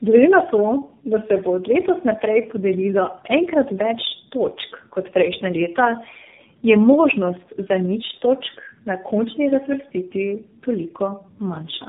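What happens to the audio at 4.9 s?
At 4.9 s you're hearing tandem speech coding, and it runs through the whole clip. The speech sounds like it was squeezed through about three low-rate codecs in a row, each re-encoding the previous one's damage, so it comes out rough, muffled and warbly.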